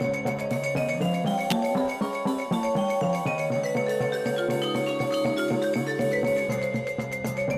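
At 1.50 s a sharp snap cuts across the audio. It is an electrical switching spike, peaking at about -5 dBFS. The likely cause is a nearby switch, motor or static discharge arcing briefly, with the audio line picking up that burst.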